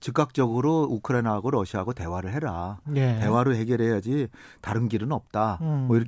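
No technical faults can be heard anywhere in the recording; the signal stays steady and intact throughout.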